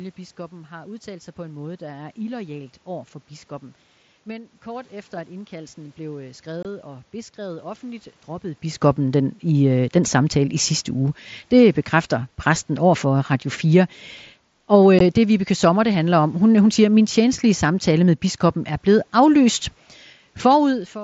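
Speech recorded over a wideband mSBC Bluetooth headset link shows unconcealed Bluetooth headset packet loss at 6.63–6.65 s (22.5 ms) and 15.0 s (15 ms): lost packets were replaced with silence or an idle pattern, leaving abrupt holes that can click. On a waveform these appear as flat gaps. On a spectrogram they are thin vertical blank strips.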